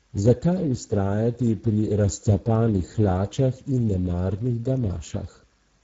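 Throughout the speech the voice has a hoarse, grainy, noisy texture, and the sound stops at 7.6 kHz. This is Speex codec damage, plainly audible from start to finish. Speex is a CELP coder that models each voice from a small set of predictor and excitation parameters. The coarseness here points to a low bitrate around 10 kbps, which leaves too few bits to describe the excitation cleanly. Its upper band is rebuilt as shaped noise rather than real detail.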